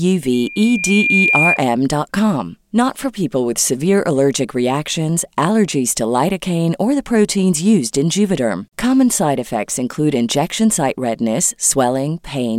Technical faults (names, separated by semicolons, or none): loudspeaker feedback squeal